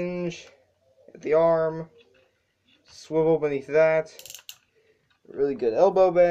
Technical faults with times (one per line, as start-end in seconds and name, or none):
none